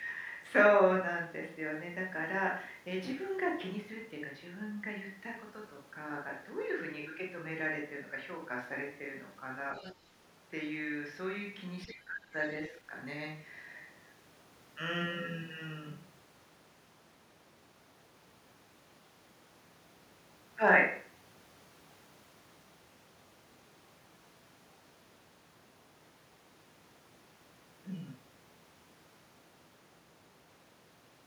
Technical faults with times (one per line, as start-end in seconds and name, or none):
9.78-9.94 other side's voice leaking through
11.85-12.34 speech suppressed in double talk
11.88-11.94 other side's voice leaking through
12.69-12.93 speech suppressed in double talk